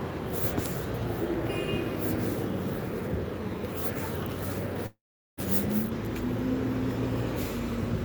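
At 4.86 to 5.39 s the sound turns into a fading buzz, then 0.4 s of silence; 0.52 s is lost, likely a long network dropout.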